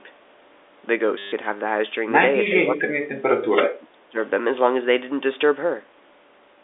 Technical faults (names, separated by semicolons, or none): system hang loop; speech suppressed in double talk